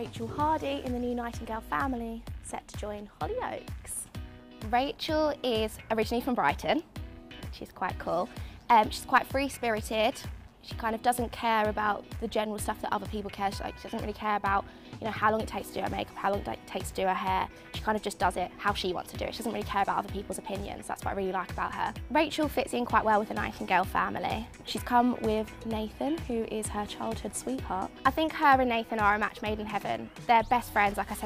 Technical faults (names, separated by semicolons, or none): none